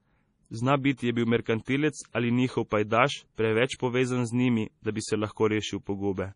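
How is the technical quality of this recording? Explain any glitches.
The recording has heavy, audible coding damage across the whole speech clip. The treble stops abruptly at about 10.5 kHz, and the sound is watery and swirly, with metallic chirps on s sounds and smeared consonant attacks. The likely cause is MP3 compression at a very low bitrate, near 32 kbps. Short of bits, the encoder cut everything above a fixed frequency and dropped weak frequency lines, which then flicker on and off from frame to frame.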